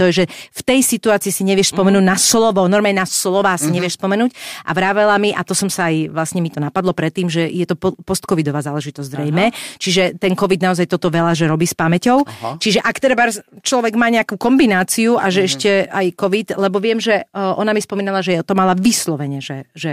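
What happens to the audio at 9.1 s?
Nothing goes wrong at 9.1 s; the speech continues intact through that moment.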